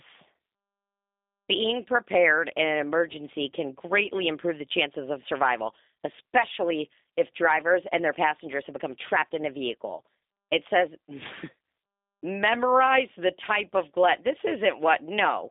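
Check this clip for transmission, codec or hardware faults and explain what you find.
One fault is present, and it runs the whole length of the speech: G.729 codec coding. Nothing reaches above about 3.8 kHz, and the band sits roughly between 250 Hz and 3.7 kHz, as on a telephone line. The speech is resynthesised from a vocal-tract filter, a pitch predictor and a sparse set of pulses per frame rather than carried as a waveform, which fits an 8 kbit/s G.729A coder. The result is plainly audible: a rough, slightly synthetic quality.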